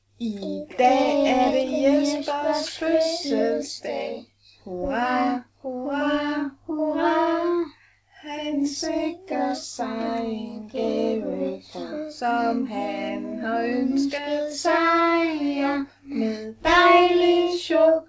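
No technical faults are audible.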